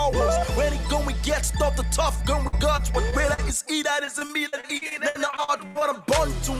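From 2.47 to 3.40 s the sound turns choppy, with short pieces dropping out, the longest about 52 ms. This is repeated packet loss: data kept arriving late or not at all, and each hole was bridged by stretching the last sound. It returns more heavily from 4.05 to 5.83 s, with many more gaps, up to 85 ms, and about a quarter of that stretch is patched-over sound.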